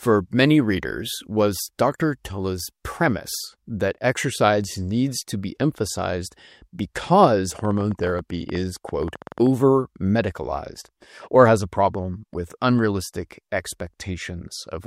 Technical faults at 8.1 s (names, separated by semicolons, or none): train of clicks